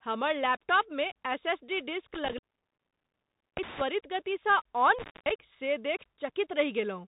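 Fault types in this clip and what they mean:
Bluetooth CVSD headset codec: A one-bit delta coder tracks the waveform up or down with an adapting step. Everything above 4 kHz is missing throughout. The damage is plainly audible. Loud bright sounds distort, s sounds turn scratchy, and granular hiss sits underneath, which fits a 64 kbit/s stream.
intermittent contact: A loose connection briefly breaks the signal path. The sound drops out with crackle at each edge, leaving faint hiss. The first break falls within 2.14 to 3.81 s and stays open about 1.19 s. The second, within 4.99 to 5.30 s, lasts about 0.23 s.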